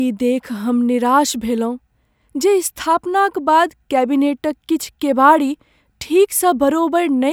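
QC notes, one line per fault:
No fault to log in these QC notes.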